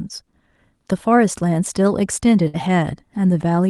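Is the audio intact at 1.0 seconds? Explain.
Yes, the speech at 1.0 seconds is intact, carried normally through the WebRTC call path with no fault at that moment.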